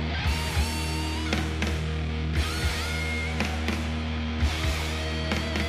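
No technical faults can be heard anywhere in this audio. There are no dropouts, gaps, glitches or other breaks in the sound at any point.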